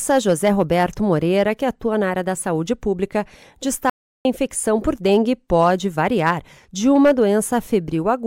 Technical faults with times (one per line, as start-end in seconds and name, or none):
3.90-4.25 audio dropout to silence